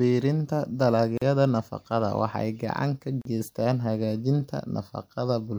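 At 1.18 s and again at 3.22 s the speech drops out for about 40 ms: a gap at a join of encoded pieces, repeating every 2.0 s. Separately encoded segments were spliced untrimmed, leaving encoder delay and padding. The waveform shows flat silence and the spectrogram a vertical blank band with smeared edges.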